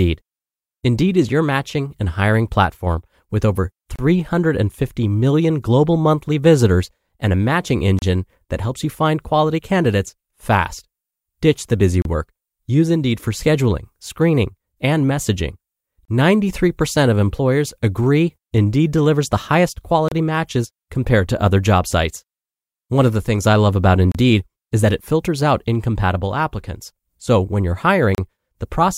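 Gaps at joins of encoded pieces open at 3.96, 7.99, 12.02, 16.05, 20.08, 24.12 and 28.15 s. Each is a silence of about 32 ms that breaks the speech every 4 s. Separately encoded segments were joined with encoder delay and padding left untrimmed.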